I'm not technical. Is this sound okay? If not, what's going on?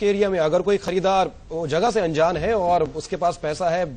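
No. There are three tiny skips, at 0.88, 1.87 and 2.86 seconds, about one per second, each dropping roughly a hundredth of a second. This is likely audio missing between chunks: the sound was handled in one-second pieces, and a sliver was lost at each join.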